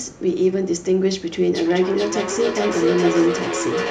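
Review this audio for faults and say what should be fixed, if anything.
From 1.55 s to the end at 3.91 s, the speech comes back as a repeat roughly every 0.4 s, with the echo reaching about 5 dB below the direct speech. This is feedback echo between two devices: two devices in the same room are on the same call, one plays what the other's microphone sent, and that microphone picks it up again. Each device's echo canceller removes only its own playback, so the other device's repeat passes through. To prevent it, keep only one device's microphone and speaker active in the room, or mute one and use headphones.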